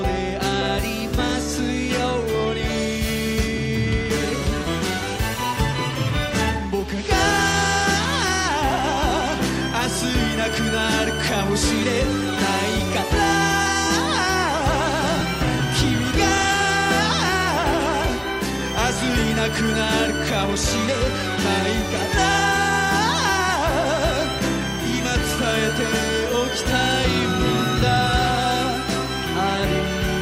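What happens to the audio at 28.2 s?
Nothing goes wrong at 28.2 s; the audio plays through that moment intact, with no audible fault.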